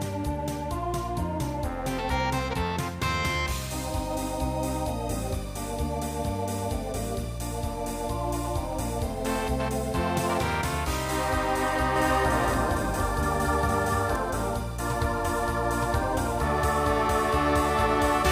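From 11.96 to 14.16 s a doubled audio track appears: a full-band copy trails by about 300 ms at roughly equal level, likely from a slower capture path. It sounds like a dry echo starting and stopping abruptly; spectrograms show every feature repeated, shifted right.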